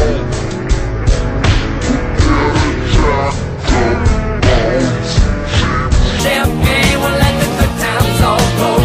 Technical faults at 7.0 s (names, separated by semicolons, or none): none